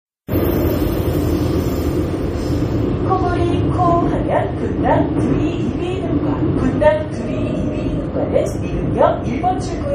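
MP3 compression runs through the whole clip, from the first moment to the last. Nothing is present above about 14.7 kHz, a hard ceiling of the kind an MP3 encoder imposes when bits run short, and the damage is plainly audible. The sound has a watery, swirling quality as weak frequency components drop in and out between frames, and sharp attacks are smeared. This likely comes from MP3 encoding at a low rate, which fits something near 40 kbps.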